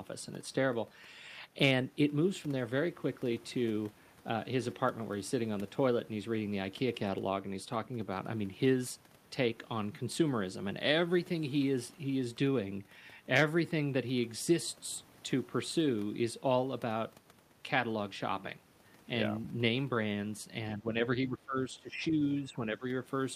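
Near the end, at 20.77–20.95, 21.28–22.21, 22.41–22.59 and 22.75–22.84 s, the speech dips by roughly 10–15 dB, which is likely speech suppressed in double talk by an echo canceller ducking the talker. Each dip shows as a sudden narrowing of the waveform.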